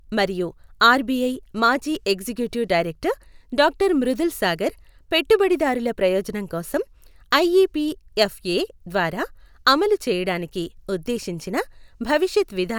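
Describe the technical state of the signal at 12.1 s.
At 12.1 s the signal is intact, with no audible dropout, distortion, glitch or other fault.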